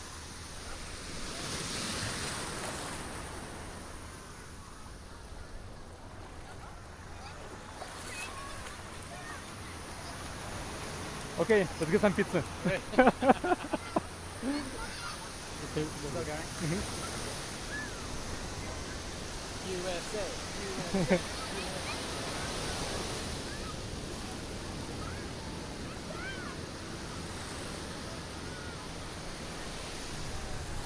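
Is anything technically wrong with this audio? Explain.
No, nothing is technically wrong with this audio. No faults can be heard anywhere in it, so there is nothing to explain.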